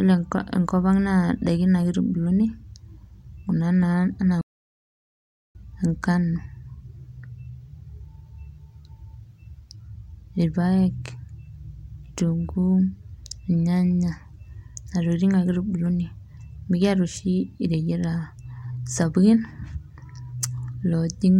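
At about 4.41 s the speech just cuts out mid-flow and the line goes dead silent for roughly 1.1 seconds, picking up again around 5.55 s. That's a playback stall: the player most likely ran dry of data or had its thread held up, so nothing reached the output until it caught up. It comes across as an abrupt gap, not a fade, with the sound resuming after the pause.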